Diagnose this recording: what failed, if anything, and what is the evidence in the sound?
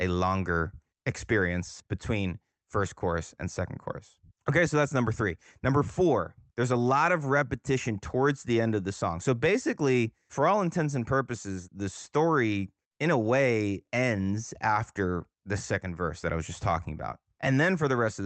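Nothing in the signal path has failed: the speech has passed through a WebRTC call path whose Opus coding limits the audio to about 8 kHz, which is ordinary behaviour for that stage, with no dropouts, glitches or other breakdowns anywhere in the recording.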